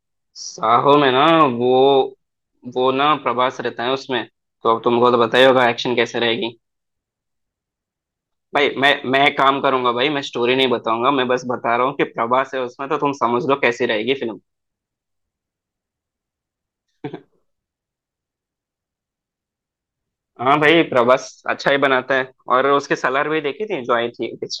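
Speech with hard clipping on its loudest moments, where the level goes past what the signal path can carry and the peaks are sliced flat. It happens at 0.93–1.44 s, 5.05–5.66 s, 8.58–9.67 s, 10.60–10.64 s, 13.65 s, 20.51–21.14 s, 21.67–21.86 s and 23.05 s, overdriven by about 0 to 3 dB. It sounds like crackle on those peaks. The waveform shows squared-off tops, and the spectrogram shows vertical smears of added high harmonics.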